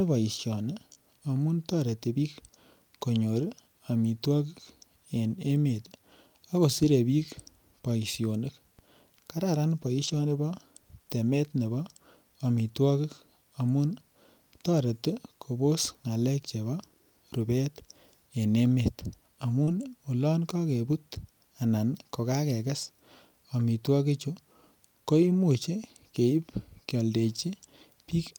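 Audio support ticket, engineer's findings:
Short concealed packet loss at 0.93–0.98 s and 19.64–19.69 s: brief smear and wobble in the speech where about 20 ms and 40 ms never arrived. The receiver's concealment continued the last sound for 24 ms and 34 ms, then blended back. On a spectrogram, smeared, stretched harmonics; on the waveform, a repeated-looking cycle.

DC step at 8.79 s: low thump while the speech carries on unchanged. The likely cause is a converter recalibrating or an offset input being switched in. On the waveform, the baseline jumps, then drifts back to zero as if through a 5 Hz high-pass. On a spectrogram, a sub-bass flash.

Lost packet rebuilt from error correction at 10.04–10.14 s and 19.67–19.73 s, 60 ms and 40 ms rebuilt, which fits three and two lost packets. No gap, but the speech turns rougher and noisier, played from the low-bitrate Opus in-band FEC copies. On a spectrogram, grainier, noisier texture.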